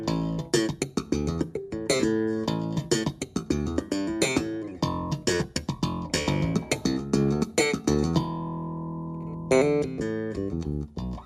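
No technical faults can be heard anywhere in this clip. Nothing in the audio calls for comment on any part of the signal chain.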